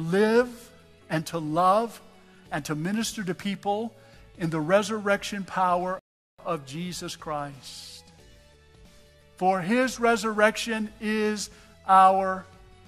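The audio has one rebuffering stall. At 5.99 s it cuts to silence, and it picks up again at 6.39 s exactly where it stopped. The player had run out of downloaded data and waited for more. No audio is lost, but the gap adds 0.39 s.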